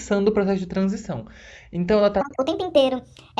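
From 2.21 s to the end, the speech jumps to 1.5 times normal speed and about 7 semitones higher, so it turns chipmunky and rushed. That's a wrong sample rate fault: the samples are being played back faster than they were captured, with no conversion, so tempo and pitch rise together by the same ratio. A 1.5 ratio fits 16 kHz material being played at 24 kHz.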